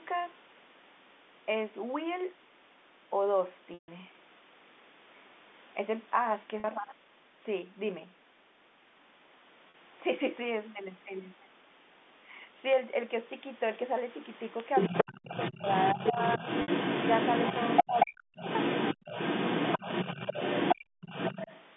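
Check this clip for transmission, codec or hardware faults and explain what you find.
The speech has four kinds of fault: repeated short dropouts patched by pitch repetition, a second voice leaking in during the last third, the talker ducking under that voice, and a brief gating of the room sound near the end. All of it sits inside the narrow telephone band of the G.711 A-law line, which limits the sound to roughly 200 Hz to 3.6 kHz.

Packet loss with pitch repetition occurs at 3.74 s (140 ms lost), 6.60 s (40 ms), 9.70 s (40 ms) and 16.62 s (60 ms). The 40 ms and 60 ms gaps sound like a held, slightly buzzy sustain. The 140 ms gap holds, fades toward silence, then cross-fades back. Each time, audio packets failed to arrive, and the receiver filled the hole by looping the last pitch period while ramping it down.

Other side's voice leaking through runs from 14.75 s to 21.64 s. A second voice comes through at roughly the same level as the talker, or a little above it. 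The likely cause is the far end's loudspeaker output reaching the talker's microphone, with the echo canceller failing to subtract it fully. The leftover echo then travels back as if it were part of the talker's own audio.

Speech suppressed in double talk occurs at 14.90 to 16.18 s and again at 17.83 to 18.47 s, each totalling around half a second of affected audio. The talker's voice dips and thins in pieces, by roughly 20 dB in the first stretch and up to roughly 40 dB in the second, where it almost vanishes. With both voices present at once, the echo canceller likely could not tell the talker from the echo and attenuated everything.

Background gated by the echo canceller shows up between 20.76 and 21.01 s. The room tone suddenly drops out, falling by about 40 dB, then snaps back a fraction of a second later. While the loudspeaker was active, the canceller clamped the microphone path hard to block echo. 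That pulled the ambient background down with it until the canceller released.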